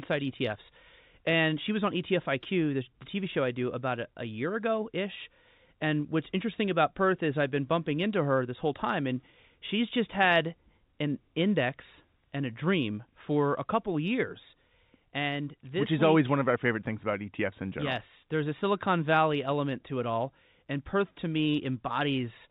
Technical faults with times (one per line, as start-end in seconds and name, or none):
none